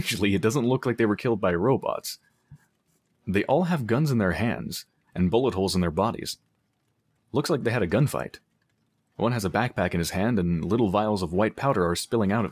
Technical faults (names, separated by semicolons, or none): sound cut by the noise suppressor